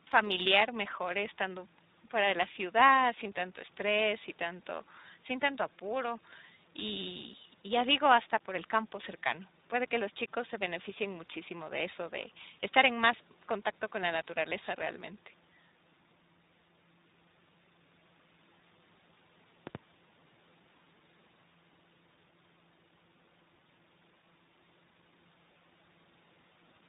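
Throughout the speech there is tandem speech coding. Every part is band-limited, with nothing above 3.8 kHz, and it has a rough, muffled, warbling grain that one pass through a codec would not produce. The texture fits two speech coders in a row, for example a CVSD link feeding through G.711 into iLBC at 15.2 kbit/s. Each stage re-encodes the previous stage's errors, so the artefacts stack up instead of staying at the level of a single coder.

From 19.67 to 19.78 s there is a loud pop, heard as two sharp pops in quick succession that peak at about 10 dB above the speech. It is likely a voltage step or pulse from a plug, a switch or static that was added to the signal and briefly shaped by the circuits after it. Unlike a dropout or a codec glitch, the speech carries on underneath, and the burst is brief and separate from the speech.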